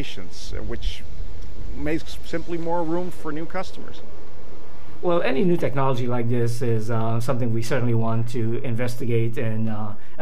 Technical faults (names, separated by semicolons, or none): DC offset